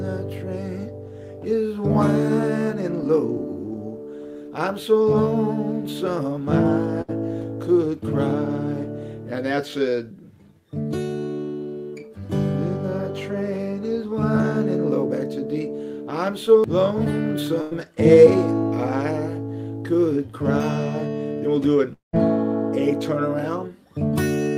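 The audio has two bursts of packet loss, at 7.01 s and 17.61 s. Each time the last sound is held as a fading buzz or hiss for about 70 and 100 ms, and then the audio resumes with 60 and 100 ms skipped. At 21.93 s a longer break, likely a network dropout, holds and fades the sound for 0.2 s, the last 0.14 s of it silence, before the audio returns with 0.2 s missing. That stretch of silence after the fade is what sets it apart from the shorter bursts.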